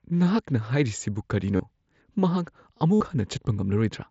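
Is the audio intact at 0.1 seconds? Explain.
Yes, the speech at 0.1 seconds is intact, with no fault at that moment.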